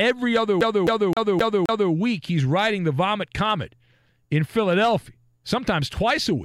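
From 0.61 to 1.92 s the speech is caught in a CD stuck on one turn: the player keeps jumping back to replay the same 0.26 s slice five times, each return marked by a brief mute. On a waveform and spectrogram, identical blocks repeat at an even spacing, separated by thin vertical gaps.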